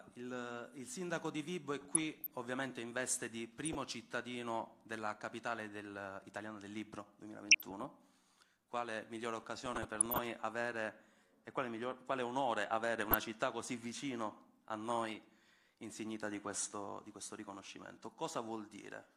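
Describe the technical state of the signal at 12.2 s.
At 12.2 s the signal is intact, with no dropout, distortion, glitch or other audible fault.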